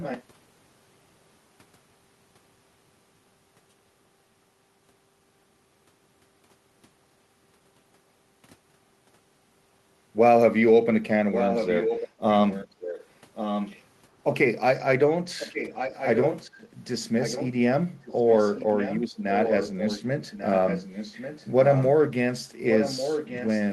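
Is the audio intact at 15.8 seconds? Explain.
No. From 15.39 to 16.58 s an echo leak brings back a faint copy of the speech about 1.1 s late, roughly 10 dB below it, likely from a far-end echo canceller missing loudspeaker pickup. Unlike room reverb, this copy is distinct and delayed.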